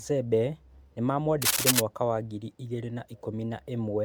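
From the start, the speech has a swirly, hollow, smeared quality, with consonant attacks blurred, which points to generation loss, likely from several passes through a lossy codec, around seven times. The content stops at about 19.9 kHz, which fits a 128 kbit/s MP3 chain. What separates this from a single low-bitrate encode is that the bandwidth is fairly wide, yet the phasey artefacts are heavier than that bitrate alone would produce, because each re-encode quantises on a shifted frame grid and the errors accumulate.

From 1.42 to 1.80 s, a dense, uneven rasping burst rides over the speech, somewhat louder than the speech itself, at roughly 5 dB above it. This is cable scratch noise, likely a worn cable, connector or control being moved so that its contact resistance fluctuates rapidly. Unlike isolated clicks or vinyl-style crackle, it is a continuous, rustling scratch that lasts for a moment. 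Unlike a dropout, the speech is not lost underneath it.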